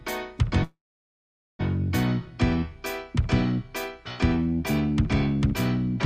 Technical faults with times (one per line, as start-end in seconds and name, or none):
0.63-1.61 call audio freeze